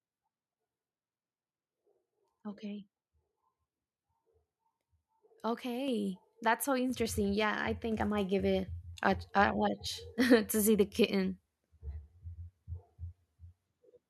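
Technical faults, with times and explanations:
5.88 s and 6.90 s, microphone volume stepped up: the input level on the mic jumps twice, first by about 5 dB, then about 4 dB a second later. The voice and the room noise get louder together in one step, so you hear it as the capture gain changing rather than the speaker.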